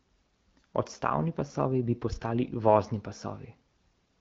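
Speech, carried over an AMR wideband (HD Voice) link at 12.65 kbit/s, with nothing technically wrong with it.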